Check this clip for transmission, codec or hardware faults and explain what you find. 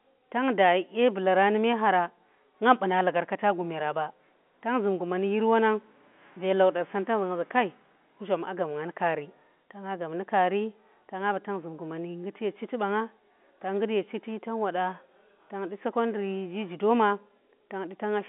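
No faults turn up in this speech, which comes over an ordinary G.711 A-law telephone path at 64 kbps, its sound held to the line band of roughly 200 Hz to 3.5 kHz with nothing above 3.8 kHz, and only faint coding damage, if any.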